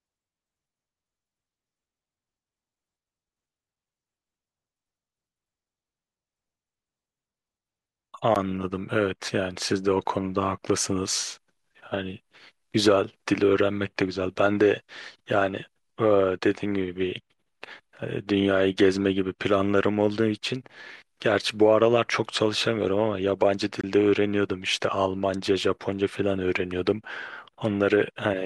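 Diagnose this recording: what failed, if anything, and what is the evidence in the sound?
Two brief dropouts break the speech: a sharp tick at 8.35 s lasting about 12 ms, and a longer hole of about 23 ms from 23.81 to 23.84 s. Each is a block of digital silence, likely from a buffer underrun. The lengths fit 512-sample and 1024-sample buffers left unfilled, so zeros played with hard edges.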